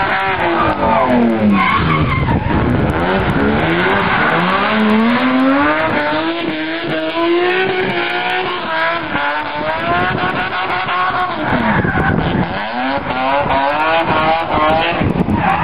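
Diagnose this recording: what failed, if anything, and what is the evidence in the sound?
Buffer-stage fault: the 48-to-24 kHz resampler restarted on every 100 ms block, so block-edge errors tick at 10 Hz throughout, only under signal.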